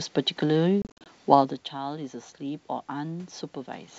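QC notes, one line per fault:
0.82–1.07 s, packet loss on an ADPCM call: over about 240 ms the speech drops into hard-edged silent gaps totalling 160 ms, the longest 50 ms, which fits a burst of many short lost packets. After each gap the decoder's predictor and step size no longer match the sender's, so speech resumes with brief slight distortion. Unlike the gradual level change near 1.5 s from the talker moving, this damage is abrupt and follows each hole.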